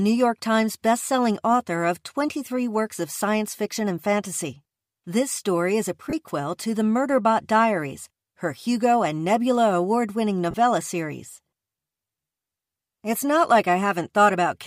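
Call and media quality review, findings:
Lost LE Audio frames, 6.10 s: brief hiss-like smear replacing the speech for about 30 ms, tonal content turning grainy, then normal audio resumes. Consistent with three consecutive 10 ms LC3 frames dropped on the Bluetooth link; decoder concealment repeating last spectrum with randomized signs.

Lost LE Audio frames, 10.51 s: same noisy smear, about 30 ms. Same link-loss mechanism and LC3 concealment, too short for the fade toward silence to set in. Light perceptual-codec coloration present throughout the clip.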